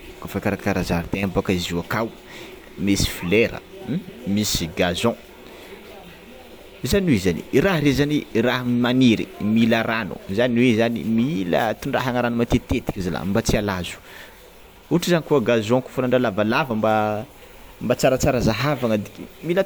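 Speech recording; no technical faults found anywhere in the audio.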